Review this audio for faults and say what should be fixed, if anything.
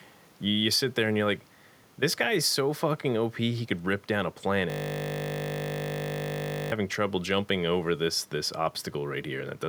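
A system hang loop runs from 4.70 to 6.72 s. It starts after "could rip down a" and ends before "trouble jumping over this". One 20 ms slice of sound repeats exactly, about a hundred times. The result is a steady 50 Hz buzz. The driver froze while the hardware kept replaying its ring buffer. To prevent it, add a watchdog that mutes output when the buffer stops being refilled.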